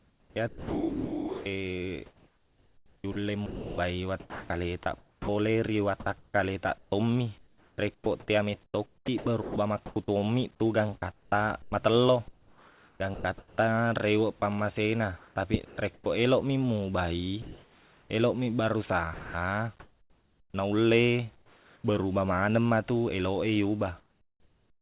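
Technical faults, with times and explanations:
0.00–16.06 s, sound chopped by the voice detector: speech repeatedly gives way to steady synthetic hiss, about 6.7 s in total. Likely the sender's detector kept toggling transmission.
17.42–21.84 s, comfort noise in place of the background: pauses fill with flat, featureless noise, about 2.1 s overall. The real room detail is likely replaced by generated noise.
19.14 s, sound dropped by the voice detector: 0.2 s of speech vanishes into noise. The detector likely mistook quiet speech for background and stopped sending.
24.00–24.82 s, comfort noise in place of the background: the tail becomes steady noise, about 9 dB quieter, sitting about 36 dB below loud speech. Likely synthetic fill, with nothing above 4 kHz from the call codec.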